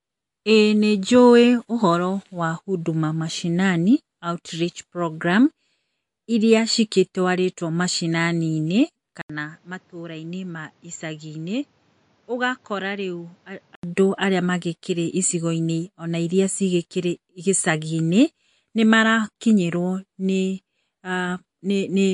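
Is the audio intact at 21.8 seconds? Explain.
No. At 21.8 s the speech carries the same damage heard across the whole clip, likely MP3 compression at a low bitrate. Nothing comes through above about 11.2 kHz, a hard treble ceiling of the kind an encoder sets when bits run short. Below it, weak frequency components drop in and out from frame to frame, giving a plainly audible watery, swirling texture, chirpy sibilants and smeared onsets, consistent with a rate near 49 kbps.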